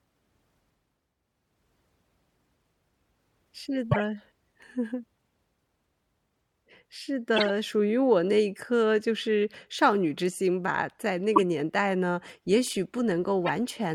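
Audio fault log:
3.91–4.02 s, 7.36–7.50 s, 11.36–11.41 s, 13.46–13.50 s: corrupt frame decoded. Damaged compressed frames were played anyway, a few at a time. Misread data puts energy at the wrong frequencies. Each is a brief chirp or noise burst, peaking near -5 dBFS, then -10, -5 and a quieter -15.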